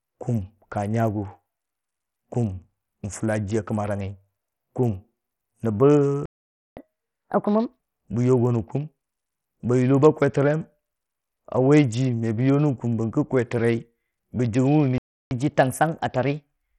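Heavy Bluetooth SBC compression runs through the whole speech clip. The likely cause is a small bit pool, which fits a rate near 64 kbps. The coarse sub-band coding leaves a gritty texture. The treble thins and flickers, and nothing sits above about 20.9 kHz.

At 6.26 s the sound stops dead for 0.51 s, until 6.77 s. This is a playback stall, likely the player running out of data. A second stall silences the audio from 14.98 s to 15.31 s, for 0.33 s.

Catch-up at higher speed follows each stall. From 6.77 s to 7.80 s the sound runs 1.5 times fast. Pitch jumps roughly seven semitones as the player resamples its backlog. From 15.31 s to the end it runs 1.1 times fast, about a semitone or two high.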